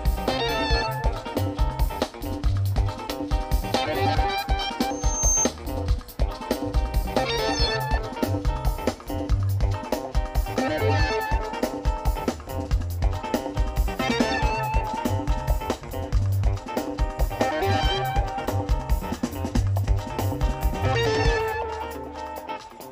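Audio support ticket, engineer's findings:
Loudspeaker feedback squeal, 4.90–5.52 s. Single tone at 6.3 kHz swelling from nothing over roughly 0.4 s, peaking at about 5 dB above the programme audio, then ends. Mic picking up its own monitor or PA speaker; loop gain above unity at 6.3 kHz, so that frequency reinforces itself each pass. Stops when the loop breaks. Check mic placement, speaker aim, and gain staging near 6.3 kHz.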